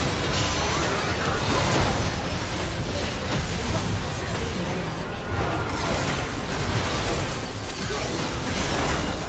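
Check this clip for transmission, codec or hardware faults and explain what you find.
The signal carries the normal marks of a call, with nothing above 8 kHz after the call microphone processing and the Opus codec of the WebRTC call path, and no fault can be heard anywhere in it.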